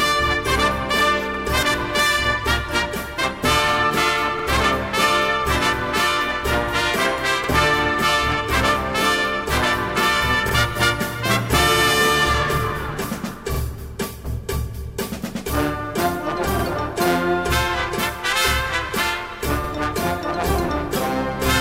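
Overlapping chunks cause a short stutter at 1.34, 4.39, 7.44, 13.54, 16.59 and 19.64 s. At each join, 3 s chunks overlap and replay about 50 ms of audio, which shows on a waveform or spectrogram as a duplicated sliver with a visible seam.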